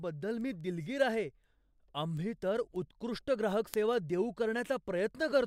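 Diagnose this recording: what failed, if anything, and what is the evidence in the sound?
A steady train of sharp ticks of uneven strength runs under the speech from 0.21 s to 5.30 s, about thirty of them at roughly one every fifth of a second. These are word clock ticks, a clocking failure at the digital interface between devices. The receiver runs on its own clock, off from the sender's by something on the order of 100 ppm. Each time the two clocks slip past each other, a single sample is dropped or repeated, leaving one tick.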